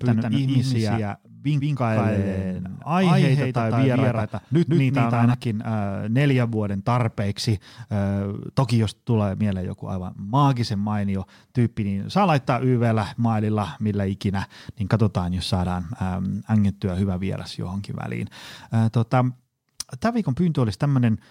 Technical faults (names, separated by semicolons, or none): doubled audio track